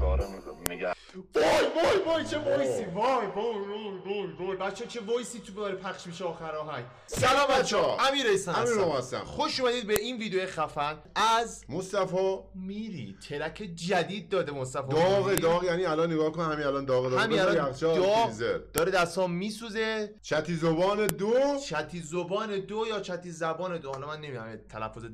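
Sharp, loud clicks at 0.66, 9.96, 15.38, 18.78 and 21.09 s are a file header played as audio: each marks a joined piece whose header bytes were left in and decoded as samples, producing a brief snap that ignores the surrounding sound.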